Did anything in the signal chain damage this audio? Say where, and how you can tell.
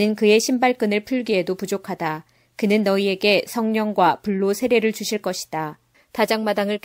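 No, nothing in the signal chain damaged this audio.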